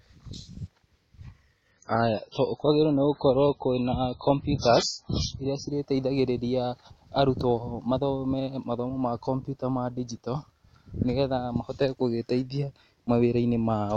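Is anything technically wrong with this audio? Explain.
Yes. From 1.71 s to 5.71 s the audio is an adaptive stream at a lower bitrate. The player switched to a leaner encoding, and the sound changes to match a fall from about 128 kbit/s MP3 to about 16 kbit/s. Nothing remains above 7.3 kHz, so the speech loses its treble and sibilance turns dull, with audible codec artefacts. The quality shifts abruptly at both ends, with no gap in the audio.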